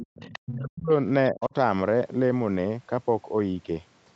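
From 0.0 to 0.39 s, a second, fainter voice sits about 20 dB beneath the speech. This is other side's voice leaking through, likely loudspeaker playback reaching the microphone that the echo canceller failed to remove fully.

From 0.37 to 0.92 s, the speech is suppressed in double talk: the level collapses by around 40 dB over roughly half a second, most likely because the canceller mistook overlapping speech for echo and attenuated everything. A shallower dip of around 25 dB follows from 1.32 to 1.54 s, lasting about a fifth of a second.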